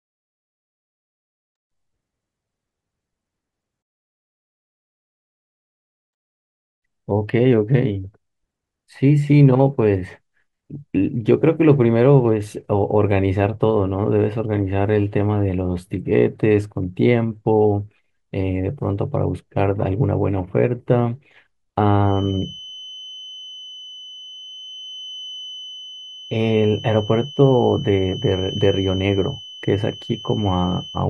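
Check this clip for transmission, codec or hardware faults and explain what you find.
There is one fault: a feedback whistle from 21.99 s to the end of the speech at 31.09 s. A thin, steady tone at 3 kHz sits well below the speech and swells and fades slowly in level. The likely cause is sound from a loudspeaker reaching the microphone with the loop held just at the feedback point, so one frequency rings on without building up. Unlike mains hum it is high-pitched, and unlike a fixed interfering tone its level drifts.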